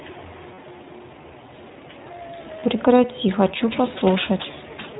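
The whole clip carries the iLBC codec. Nothing above 4 kHz survives. Each short frame, which fits 20 ms, is coded on its own. The damage is plainly audible: speech sounds slightly rough and synthetic throughout, consistent with the 15.2 kbps mode.

At 0.54 to 0.59 s come lost iLBC frames, about 40 ms of audio, fitting two frames. The decoder repeats the last pitch cycle with noise, giving a brief buzzy held vowel. At 2.60 to 2.63 s, a single 20 ms frame drops the same way. Both recover almost at once.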